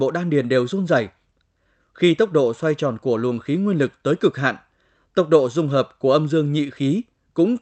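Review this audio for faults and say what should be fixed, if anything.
Nothing here needs fixing; the speech comes across as you'd expect from an ordinary call connection, with no faults to chase down.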